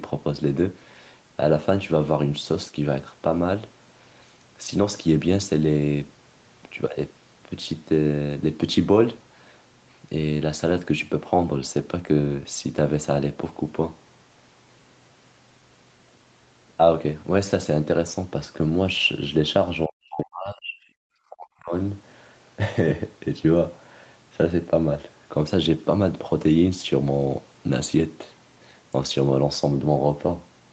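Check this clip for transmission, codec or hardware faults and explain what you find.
One fault shows up, twice in quick succession, in speech that is band-limited at 8 kHz as a wideband call codec would leave it.

Speech suppressed in double talk occurs from 19.86 to 20.75 s and again from 21.29 to 21.73 s. The level sinks by as much as about 40 dB, so the talker fades and breaks into fragments, likely because an echo canceller mistook the talker for loudspeaker echo while both sides spoke and gated them down. The deep ducking over nearly a second, rather than clicks or abrupt silent gaps, separates it from packet-loss dropouts.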